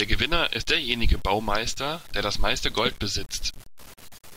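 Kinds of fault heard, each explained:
Low bit depth without dither: grainy distortion follows the speech throughout, sitting only around 25 dB below it, likely from undithered truncation to 7 bits.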